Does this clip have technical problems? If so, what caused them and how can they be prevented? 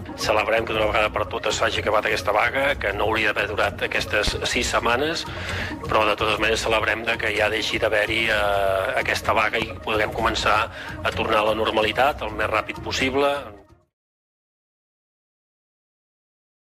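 Yes, two loud pops at 4.28 to 4.30 s and 9.62 to 9.65 s, each a single sharp thump about 15 dB over the sound, most likely voltage spikes from a switch, plug or static. Secure connectors and ground your gear to prevent them.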